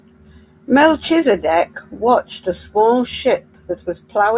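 No technical faults are audible.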